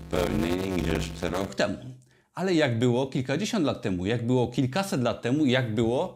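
From the start to 1.5 s there is a block size mismatch (padded). Each block is short and topped up with silence, which fits 256-sample writes. The gaps buzz at about 92 Hz. The speech runs at 0.533 times normal speed, with the timbre kept.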